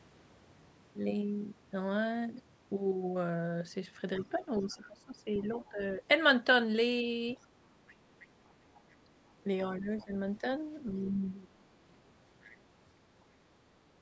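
Speech recorded through call microphone processing, with nothing above 8 kHz. The other side's voice leaks through, faint, roughly 20 to 25 dB under the talker, at 4.15–5.69 s, 7.36–9.43 s, 9.99–10.05 s and 11.91–12.55 s, likely from residual loudspeaker echo the canceller missed. Speech is suppressed in double talk at 4.19–6.02 s and 9.76–11.62 s, dipping in pieces by up to about 20 dB and 15 dB respectively, likely because the canceller attenuated both voices while they overlapped.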